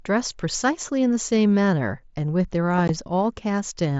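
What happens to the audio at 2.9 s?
At about 2.88 s the speech drops out for roughly 15 ms: unconcealed Bluetooth headset packet loss. The gap fits two lost 7.5 ms mSBC packets on the wideband headset link. Nothing fills them, so silence replaces the signal and the speech stops and restarts with abrupt edges. On a waveform this shows as a short flat stretch cut cleanly into the speech. A spectrogram shows a thin, empty vertical slot across every band up to 8 kHz.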